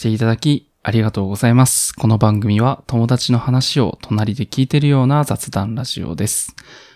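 No technical faults can be heard anywhere here.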